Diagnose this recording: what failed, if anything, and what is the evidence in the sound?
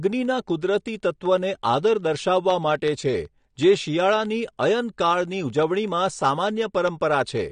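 The speech sounds dull, with plainly audible codec damage, and nothing is present above 9.7 kHz. That hard ceiling and the loss of fine spectral detail point to the codec stage, most likely AAC compression (AAC-LC) at a low bitrate, around 32 kbps. At that rate the encoder lowers its cut-off and spends too few bits on the frequency lines it keeps, so the upper band disappears and the remaining detail is coarsened.

Regular ticks run through the audio every 0.125 s, from 0.13 s to 7.38 s, about fifty in all. This is the pattern of periodic USB or driver dropouts at the driver or buffer stage. At a fixed interval, something blocks the audio path, and a tiny slice, roughly a tenth of a millisecond, is replaced by silence. Each gap breaks the waveform abruptly, and the even spacing gives the ticks their steady rhythm.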